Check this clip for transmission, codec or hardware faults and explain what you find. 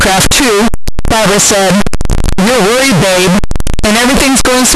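One fault runs through the entire clip. Signed and unsigned mixed up: the speech is buried under very loud, harsh distortion, and pauses are as loud as speech. The cause is likely 16-bit samples read with the wrong sign convention, flipping the top bit so every zero crossing leaps across the full range. Unlike ordinary clipping, silence never stays quiet.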